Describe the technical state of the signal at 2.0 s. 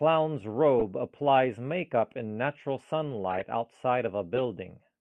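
At 2.0 s the speech signal is intact, with no technical fault audible at that moment.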